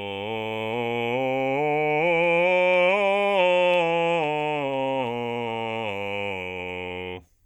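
From 0.24 s to 7.40 s the music carries a faint, regular ticking, some forty tiny clicks spaced roughly 0.15 s apart, about seven per second, which is clearest on sustained material. These are clock slip clicks, likely caused by two devices running on unsynchronised clocks. The tick rate points to a clock mismatch of around 150 ppm, with each tick fitting a single sample being dropped or repeated as the error accumulates.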